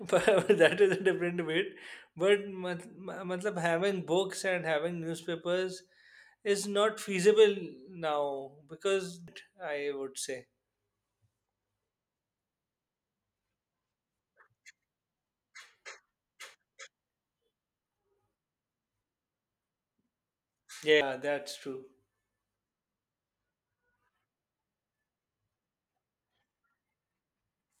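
A speech recording with two CD skips, at 9.27 s and at 21.01 s. Each is a short tick. The sound drops out very briefly, for a couple of milliseconds at the first and a few milliseconds at the second. It then resumes from a different point in the recording. A knock or a disc flaw threw the laser onto another turn of the spiral track. The player muted for an instant and carried on from that new place.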